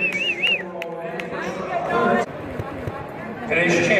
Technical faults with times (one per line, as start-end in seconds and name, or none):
2.71 CD skip